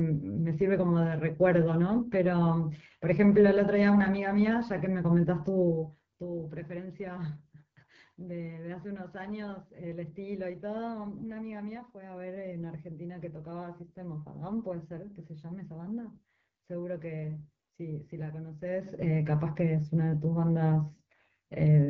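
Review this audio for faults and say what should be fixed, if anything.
The AMR wideband (HD Voice) codec roughens and rasps the speech throughout, fitting a low 8.85 kbit/s mode. On a spectrogram, harmonics blur below 6.4 kHz, noise fills 6.4 to 7 kHz, and nothing appears above. Prevent it by sending at 12.65 kbit/s or higher, or by using a wider-band codec.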